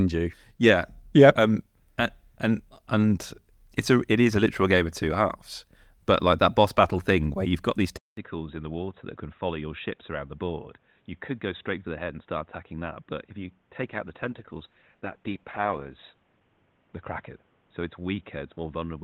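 A speech recording in which, at 7.97 s, a 200 ms silence precedes an abrupt change: the level falls by roughly 10 dB, nothing remains above 3.8 kHz, and a new noise floor sits around 35 dB below the signal through to the end, most likely an input switched to a poorer device. From 13.82 s to 18.03 s a call bitrate drop adds coarse, watery coding on top, with the roughest stretch lasting about 1.9 s, which fits the encoder falling from 40 kbps to 13 kbps before recovering.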